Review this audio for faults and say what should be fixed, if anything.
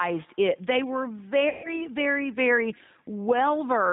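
The level rises in quieter stretches and is pulled down under louder sounds throughout, by about 5 dB. This is gain pumping, likely from input gain set too high with a fast limiter reacting. It differs from steady compression because the level audibly moves. Set the input gain lower so the limiter rarely acts.

The whole clip has the rough, slightly synthetic quality of the G.729 codec, and the damage is plainly audible. Nothing above 4 kHz is present, which fits an 8 kbit/s G.729 coder rebuilding speech from a filter, a pitch predictor and a few pulses per frame. A simple low-pass filter would only dull the sound, but this also adds roughness. Use a wideband codec where the link allows it.

VoIP packet loss concealed by the speech codec appears from 1.49 to 1.75 s, between "it they were" and "very very". The decoder stretched the last sound into a fading continuation, which points to about 150 ms of lost audio, and it was still recovering at the end of that span. 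A plain dropout would leave silence, but here the decoder fills the gap with synthetic sound. Improve network reliability or add jitter buffering and forward error correction.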